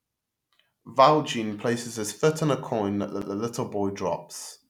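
At 3.22 s the speech breaks with a CD skip. The player's laser lost its track, likely from a knock or a flaw on the disc. It jumped to another turn of the spiral. The player muted for roughly a hundredth of a second. A tick or short gap marks that point. Playback then resumes from a different point in the recording. The speech does not continue smoothly but lurches abruptly to another place.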